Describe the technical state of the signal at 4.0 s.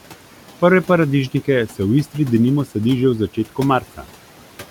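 At 4.0 s the audio falls within a stretch of speech cut by the noise suppressor, from 3.81 to 4.05 s. The suppressor mistook soft speech for noise and pulled it down by up to about 9 dB for roughly a tenth of a second, so the speech there sounds swallowed or faint. On a waveform the envelope dips abruptly, and a spectrogram shows faint, thinned energy there.

Noise suppressor artifacts also run through this moment. The room noise, about 19 dB under the speech, is cut by about 12 dB frame by frame, leaving a residue that looks patchy and blotchy on a spectrogram.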